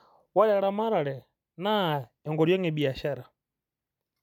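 Nothing goes wrong anywhere in this bit of speech, so there's no fault to point to at any moment.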